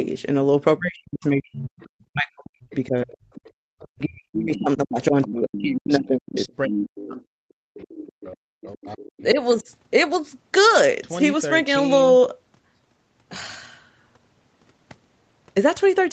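From 0.79 s to 9.68 s the speech repeatedly dips and breaks up, falling as much as 40 dB for about five seconds in all. This is speech suppressed in double talk: the echo canceller likely mistook simultaneous talking for echo and turned the talker down.

Inside that stretch, a second voice surfaces at 1.8 s, 3.33 s, 5.22 s, 6.7 s, 7.82 s and 8.99 s. It is loudest near 6.7 s at roughly 10 dB below the speech. This is the other side's voice leaking through from the loudspeaker, likely left behind by incomplete echo cancellation. Throughout, the audio carries nothing above 8 kHz, as expected on this call path.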